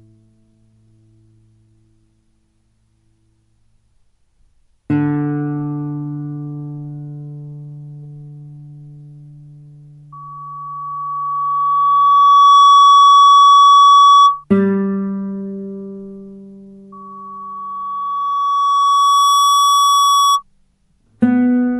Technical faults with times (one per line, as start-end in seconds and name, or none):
10.12-14.44 loudspeaker feedback squeal
16.92-20.43 loudspeaker feedback squeal